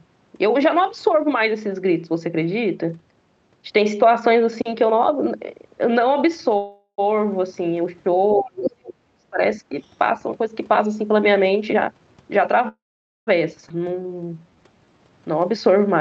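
Call audio freeze at 6.57 to 7.0 s: the speech stalls into a fading fill with about 80 ms of silence, adding roughly 0.41 s, likely because delayed packets emptied the jitter buffer.

Speech suppressed in double talk from 8.37 to 9.41 s: the voice drops deeply, by around 40 dB at worst, likely as the echo canceller turns everything down while both sides talk.

Other side's voice leaking through at 8.66 to 8.71 s: a brief scrap of the far talker comes through only slightly below the speech, likely left behind by incomplete echo cancellation.

A second, shallower double-talk suppression at 9.69 to 9.76 s dips the voice by about 10 dB for a moment.

Jitter buffer speed-up from 11.67 to 12.59 s: speech runs at 136% with unchanged pitch, sounding hurried, as about 0.3 s of pitch periods are trimmed to shrink excess buffered delay.

Call audio freeze at 12.68 to 13.29 s: the sound halts, with about 0.49 s of near silence, inserting roughly 0.59 s before resuming where it stopped.

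Skip ahead at 13.69 to 13.72 s: playback jumps forward almost seamlessly, dropping about 0.2 s of speech when later audio was already waiting.

Jitter buffer slow-down from 13.78 to 15.11 s: speech drags at 84% speed with steady pitch, as repeated pitch periods add 0.22 s to rebuild the buffer.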